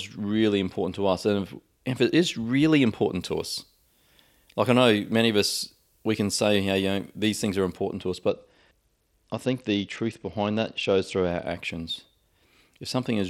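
Right after "it is really important", from 3.20 to 7.78 s, you get pre-emphasis left on. The treble boost never got its matching cut, so highs sit about 8 dB hot at 10 kHz relative to 1 kHz. That fits the CD 50/15 µs curve, and the speech turns thin, bright and hissy on sibilants. Then, just after "to us", from 8.29 to 11.45 s, there's a Bluetooth SBC bit pool drop. The link squeezed the bit budget, sounding like a fall from around 28 to 10, roughly 84 kbps. The top sub-bands starve, so the treble goes dull and a gritty noise creeps in until it recovers.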